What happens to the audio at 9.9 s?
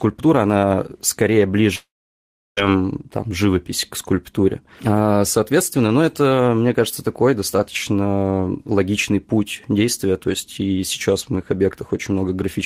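Nothing goes wrong at 9.9 s; the speech there carries on without any dropout, click, distortion or other audible fault.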